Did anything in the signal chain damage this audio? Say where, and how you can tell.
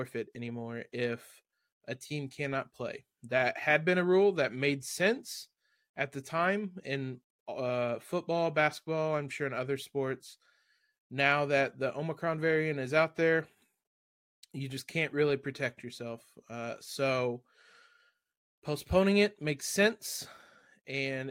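No, none of the stages from capture through playback left any audible damage on this speech recording.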